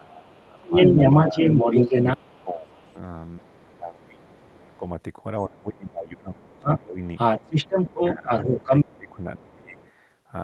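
A speech recording with two repeated faults. The first is speech suppressed in double talk. The talker's level sinks by up to about 15 dB from 0.0 to 1.36 s, about 25 dB from 2.16 to 4.83 s, and about 20 dB from 5.44 to 6.99 s and from 7.9 to 9.78 s. The likely cause is an echo canceller meeting both sides talking at once. It could not tell the local talker from loudspeaker echo, so it turned everything down.

The second fault is the other side's voice leaking through. A second voice runs alongside the talker from 0.25 to 4.77 s and from 6.45 to 9.16 s. It sits roughly 10 dB stronger than the talker there. A brief, much fainter scrap follows from 9.77 to 9.89 s. This is likely loudspeaker playback that the echo canceller failed to remove from the microphone. The audio passed through an Opus call path whose band stops near 12 kHz.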